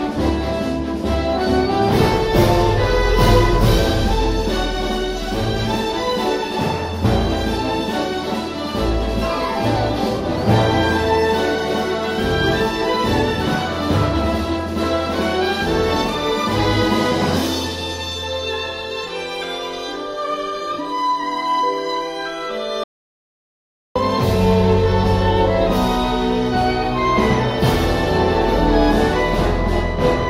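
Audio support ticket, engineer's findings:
Hard cut to total silence at 22.84 s, sound returning abruptly at 23.96 s. Gap about 1.12 s, no room tone or noise floor. Audio dropout to silence. Likely cause: input path lost briefly (device disconnect, link failure or stray mute) while recorder kept writing silence. Content in gap unrecoverable.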